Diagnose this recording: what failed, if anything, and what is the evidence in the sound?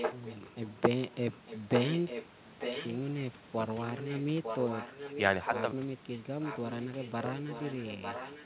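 A second copy of the speech trails it by 0.9 s at 0.0–2.25, 2.59–2.89, 3.79–5.63 and 6.41–8.46 s, at first only slightly quieter, then fading across the clip. Likely an echo leak in call processing: loudspeaker sound reached one side's microphone and slipped past its echo canceller.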